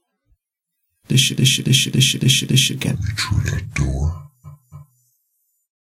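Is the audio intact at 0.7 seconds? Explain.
Yes, the sound is intact at 0.7 s, with no dropout, click, distortion or other fault at that moment.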